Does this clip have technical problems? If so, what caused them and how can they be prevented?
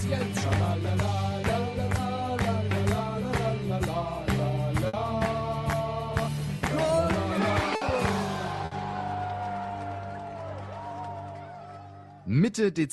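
Yes. Burst of packet loss at 4.87, 7.75 and 8.65 s: lost packets left the last sound held and fading for 60 ms, with 60 ms skipped. A steadier network link, a deeper jitter buffer or forward error correction would prevent these gaps.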